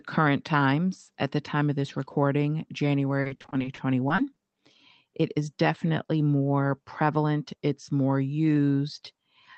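From 3.21 to 4.38 s, repeated packet loss breaks up the speech. Short holes of up to 40 ms, about a quarter of the stretch, are patched by extending the preceding sound, giving a choppy, robotic texture over a call path band-limited to 8 kHz.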